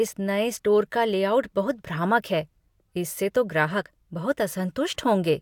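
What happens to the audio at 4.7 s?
Nothing goes wrong at 4.7 s; the speech carries on intact through that moment.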